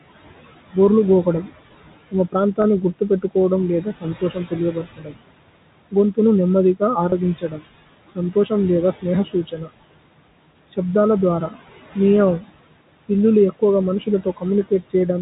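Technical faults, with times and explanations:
Throughout: noise suppressor artifacts. The suppressor pulls down every band it judges to be steady noise, by about 19 dB here. The room noise sinks in the pauses and swells back under the speech. A spectrogram shows the background floor dipping between utterances and rising beneath them.
0.73 to 1.52 s, 2.11 to 5.18 s, 7.38 to 9.7 s, 11.49 to 12.44 s and 13.09 to 14.94 s: speech cut by the noise suppressor. Here the suppressor mistakes parts of the speech for noise and turns them down with the background. Soft consonants and word endings come out swallowed. The cuts are mild in the first and fourth spans, at about 9 to 10 dB and roughly a tenth of a second each. They are deepest from 2.11 to 5.18 s, at about 20 dB over well over half a second, and strong again around 7.4 to 9.7 s and 13.1 to 14.9 s. On a spectrogram, faint high-frequency fricative energy and trailing syllable tails go missing.
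7.1 s: packet loss with pitch repetition. One 20 ms stretch of audio never arrived, which fits a single lost packet. The receiver filled it by repeating the last pitch period, so there is a brief held, slightly buzzy sound instead of a gap. On a waveform this appears as a few repeated cycles of the same shape, fading in level. A spectrogram shows the harmonics frozen flat for that instant instead of gliding. The G.711 telephone coding itself, capped below 4 kHz, adds nothing audible of note.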